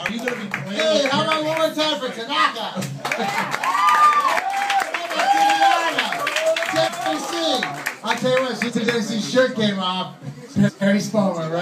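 Frames out of order at 5.42 to 5.53 s, 6.68 to 7.07 s, 8.68 to 8.88 s and 10.53 to 10.83 s: at each point, two adjacent blocks of about 46, 186, 93 and 139 ms play swapped, giving a garbled flutter.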